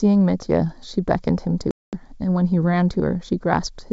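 The clip is speech over a wideband call. Channel delay causes comb filtering throughout. One channel lags the other by a fraction of a millisecond, and the two are summed to mono. Shared content cancels at evenly spaced frequencies, the first notch falling around 3 kHz. The sound is hollow and phasey. From 1.71 to 1.94 s there is packet loss on an ADPCM call. About 220 ms drops to hard-edged silence, which points to a long run of lost packets. The decoder's predictor and step size lose track of the sender. When speech returns it is briefly slightly distorted before settling. The G.722 coding itself adds at most a faint trace.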